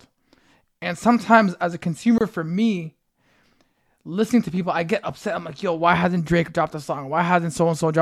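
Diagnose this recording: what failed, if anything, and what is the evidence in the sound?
A gap at a join of encoded pieces, at the codec stage: from 2.18 to 2.21 s, between "and sometimes as a" and "for me", the speech stops for 26 ms with smeared edges, then resumes where it left off. Nothing is skipped, unlike a network dropout. Separately encoded pieces, apparently 6 s long, were joined with their encoder delay and padding left in.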